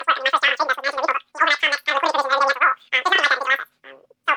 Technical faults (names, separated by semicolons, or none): wrong sample rate